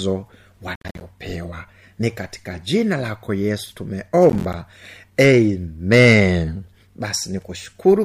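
Two bursts of processor overload crackle occur in this speech, from 0.76 to 1.01 s and again from 4.30 to 4.54 s, right after "katika jina lako yesu". In each, the processor misses a run of buffer deadlines, and every missed block drops to silence with hard edges. The result is a gritty, tearing crackle over the speech. The spacing of the dropouts fits buffers of around 10 ms.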